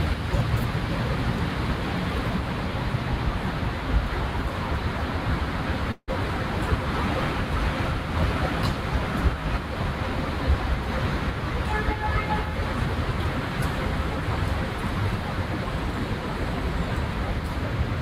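A call audio freeze runs from 5.91 to 6.10 s. For about 163 ms the last sound before the break is drawn out into a fading buzz, followed by roughly 30 ms of silence. The audio then resumes exactly where it left off, with nothing lost, but now runs 163 ms later than before. The likely cause is packets stalling in transit until the jitter buffer drained, leaving the receiver to fill the gap with synthesized sound.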